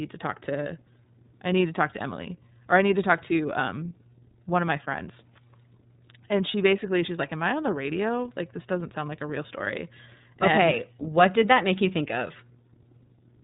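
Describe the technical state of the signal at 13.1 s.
At 13.1 s, as throughout the clip, iLBC codec damage is plainly audible: rough, synthetic speech with the spectrogram empty above 3.8 kHz, fitting independently coded 30 ms frames.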